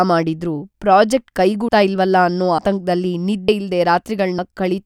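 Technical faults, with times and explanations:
1.68 s, 2.58 s, 3.48 s and 4.38 s, audio missing between chunks: the speech jumps forward at each point, the two sides butted together with no gap of silence, so a small piece of sound, roughly a tenth of a second, simply vanishes. The skips recur every 0.9 s, which fits likely processing in 1 s chunks that loses the end of each block. Unlike a dropout to silence, nothing goes quiet.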